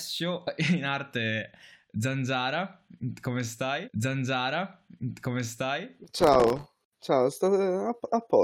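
A speech recording with two playback faults. From 3.87 to 5.86 s, a stream segment is repeated. The player queued the same stretch twice, so about 2.0 s of speech plays again. A small blip marks the jump back. From 6.04 to 6.79 s comes processor overload crackle. The processor missed dozens of deadlines in a row on very short buffers of a millisecond or two. Each miss left a hard-edged silent gap, and together they form a gritty tearing over the speech.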